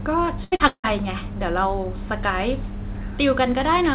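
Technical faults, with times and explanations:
0.44–0.55 s, burst of packet loss: The speech turns into a held buzz or fading hiss for roughly 80 ms, then jumps ahead. The receiver got nothing usable for this span and kept extending the last sound, lowering it as the gap went on. When real audio returned, the speech picked up further along, so about 80 ms of the utterance is simply gone. The call audio is narrowband, with nothing above 4 kHz.
0.56–0.63 s, short concealed packet loss: Just after the first gap there is a brief smear and wobble lasting about 40 ms. A few hundredths of a second of audio never arrived in time. The decoder patched the hole by continuing the last sound and then crossfaded back into the real signal. The result is blurred rather than silent.
0.68–0.87 s, long network dropout: A decaying buzz or hiss runs for roughly the first 90 ms. It gives way to about 70 ms of near silence before the speech resumes further on, about 160 ms of it missing. 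The likely cause is a stretch where no packets reached the receiver. Concealment stretched the last sound until it faded out and then left a quiet gap. Coming straight after the two earlier losses, it makes this whole stretch from 0.44 to 0.87 s sound choppy and broken.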